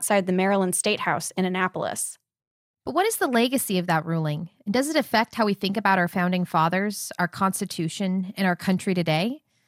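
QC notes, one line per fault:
No faults heard in this speech clip.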